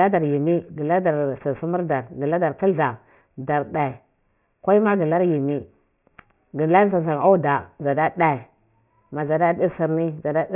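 Gritty, metallic sibilants run through the whole speech clip, with the spectrum pressing hard against a ceiling at 3 kHz. This is aliasing. The sound was downsampled without a low-pass filter, which fits a drop from 44.1 kHz to 6 kHz, so energy above 3 kHz folds back into false pitches roughly 25 dB below the speech.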